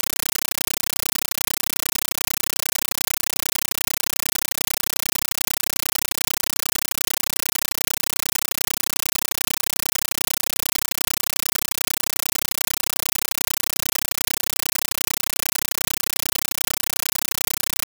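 An AC-3 bitstream, likely around 448 kbps, was passed as PCM without decoding, so the compressed stream plays as audio: loud chattering static throughout, 9.33 ms noise bursts repeating 31.25 times a second.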